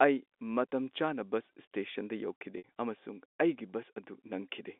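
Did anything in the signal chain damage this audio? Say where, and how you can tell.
Yes. Packet loss with pitch repetition occurs at the network stage, from 2.58 to 2.64 s, a 60 ms gap that points to a few consecutive packets going missing. The receiver bridges it by looping the last pitch period, which is heard as a brief held, buzzy tone. Because the gap outlasts the roughly 50 ms fade applied to that repeat, it sinks toward silence before the speech returns through a short cross-fade. The G.711 line band, 250 Hz to 3.6 kHz, frames the sound throughout.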